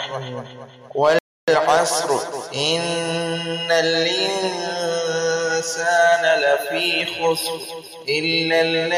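At 1.19 s the audio drops into silence and stays there until 1.48 s, adding about 0.29 s. This is a rebuffering stall: playback exhausted its downloaded data and waited for more. When it resumes, it continues exactly where it paused, with nothing skipped.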